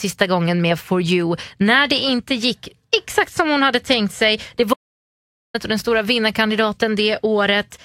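The input feed to the recorder was likely interrupted for a moment, by a dropped connection, a failing device or a brief mute, while the writer kept storing silence, producing an audio dropout to silence in this speech clip. From 4.74 s to 5.54 s the sound stops dead, leaving about 0.81 s of total silence with no room tone, then resumes abruptly at "och den stora". Whatever was said during that gap is missing.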